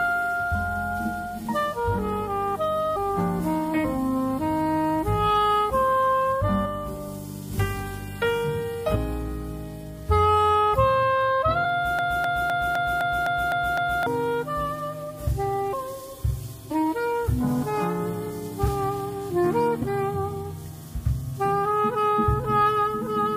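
Compressed frames skipped is the first thing you'll hear, with jumps at 2.95, 3.83, 6.64, 8.94 and 11.64 s, then 15.72, 16.70 and 19.81 s. At each one, whole frames of the encoded audio never get played, so the sound lurches ahead by somewhere between a fifth and half a second. The jumps come in steps of about 23.2 ms, which fits 1024-sample frames at 44.1 kHz.

From 11.99 to 14.07 s there's a broken-record loop. A 255 ms fragment repeats exactly, back to back, eight times, and whatever should have played during those two seconds is gone. It's likely that the player or stream stalled and kept handing out the last chunk it had buffered.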